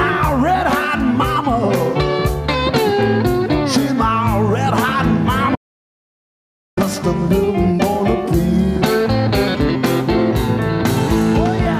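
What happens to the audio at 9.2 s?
Nothing goes wrong at 9.2 s: the audio plays through that moment intact, with no dropout, click, glitch or other fault.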